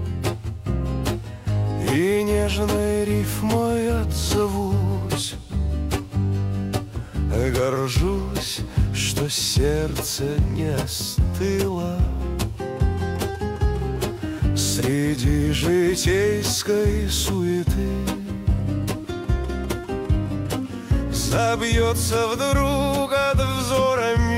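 No technical faults can be heard anywhere in this audio. Nothing in the sound points to a problem in how it was captured, processed or delivered.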